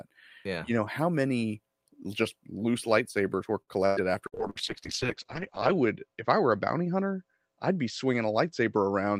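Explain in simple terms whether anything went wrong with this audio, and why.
From 3.61 to 4.58 s there is repeated packet loss (robotic sound): four short dropouts, the longest about a tenth of a second, patched by stretching earlier sound, so it turns choppy.

From 4.31 s to the end there is a call bitrate drop: the connection was forced to send far less data, so the speech becomes rough and muffled, losing its crisp high end.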